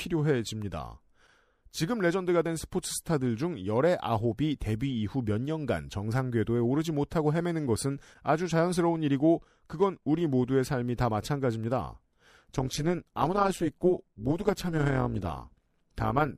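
From 12.42 s to 16.37 s the speech takes on a rough, metallic buzz: overlap-add ripple. Frames were rejoined with overlaps whose window gains don't sum evenly, so level dips by about 11 dB once per frame, around 150 times a second. Unlike dropouts, nothing goes missing.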